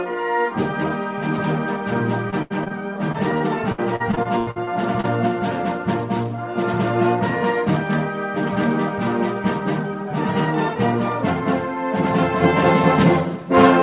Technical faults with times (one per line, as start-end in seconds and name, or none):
2.30-2.72 repeated packet loss (robotic sound)
3.12-5.05 repeated packet loss (robotic sound)